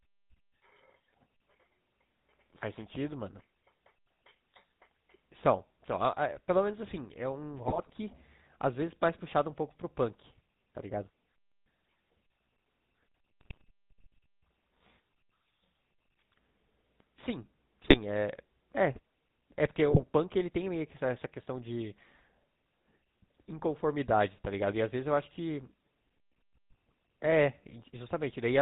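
GSM full-rate codec damage runs through the whole recording and is plainly audible. The character points to the 13 kbps full-rate coder: it rebuilds the speech from a vocal-tract filter driven by a sparse, regularly spaced pulse train, discarding most of the original excitation detail. Nothing survives above 4 kHz, so the top end is dull and closed off, while the simplified excitation lends the voice a steady buzzy, gravelly roughness.

GSM bit errors break through at 7.68 to 7.90 s, 13.41 to 13.63 s, 17.82 to 17.99 s and 19.88 to 20.04 s, each burst lasting roughly a fifth of a second. Corrupted bits reach the decoder, so the filter shape, pitch and gain values it receives for those frames are wrong. The spectrum warps and the level jumps from frame to frame, and the voice collapses into squawks, pops and gargling before clearing again.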